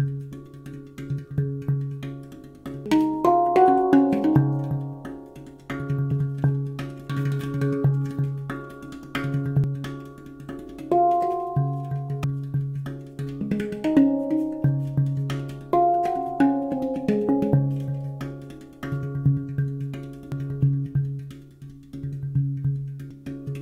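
The audio has damaged data in a compressed stream at 2.86, 9.64, 12.24, 20.32 and 23.11 seconds. Each is a brief chirp or blip. Corrupted bytes there make the decoder misread frames, lose sync and hunt for the next valid frame header.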